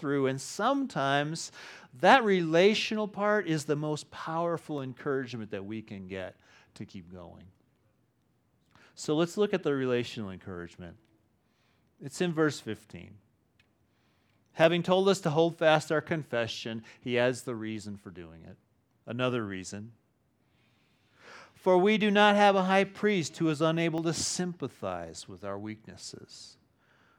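Four sharp clicks break the speech, at 4.78 s (between "is the most powerful" and "encouragement that we can"), 14.64 s, 23.98 s (after "high priest who is") and 26.04 s (after "to sympathize with our"). Each is likely dropped samples: a fraction of a millisecond missing, so the waveform jumps abruptly to a later value. Unlike a dropout, no audible gap or lost sound follows, only an instantaneous tick that shows as a thin vertical line across the spectrum.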